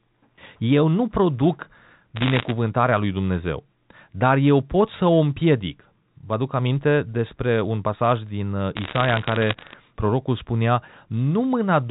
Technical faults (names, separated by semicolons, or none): bit errors on a digital phone line